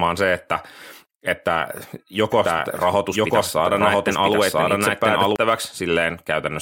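A speech recording carries a doubled audio track from 2.32 s to 5.36 s: a second, full-band copy of the speech runs about a second behind the original at roughly the same level, most likely because the signal is being picked up again through a slower path. Unlike an echo or room reverb, the copy has no decay or reverberant colouring, and it cuts in and out abruptly at those two times rather than fading.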